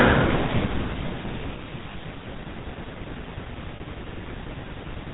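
GSM full-rate codec coding, throughout the speech: the sound has the buzzy, gravelly roughness of the first GSM codec, which fits a 13 kbps stream. This codec reduces the voice to a vocal-tract filter driven by a coarse, regularly spaced pulse train that keeps only one in three excitation samples. It discards everything above 4 kHz, so the speech is both band-limited and plainly coarsened.

Lost GSM frames, at 1.92 to 1.96 s and at 3.76 to 3.81 s: at each gap the decoder re-used the parameters of the last good frame instead of decoding new data, so the sound briefly freezes into a rough, metallic ring. The first gap lasts 20 ms, which fits a single dropped frame. The second lasts 40 ms, consistent with two consecutive frames, and its held ring is longer.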